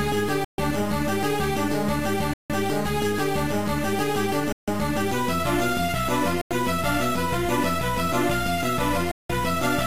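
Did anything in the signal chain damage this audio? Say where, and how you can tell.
Yes: five Bluetooth stalls at 0.45–0.58 s, 2.33–2.50 s, 4.52–4.68 s, 6.41–6.51 s and 9.11–9.30 s, each a hard drop to silence lasting 94 to 182 ms before the sound resumes. The sharp edges and digital silence point to the wireless playback link. Likely cause: radio interference delayed packets, the headphone buffer emptied, and output halted until retransmitted audio arrived.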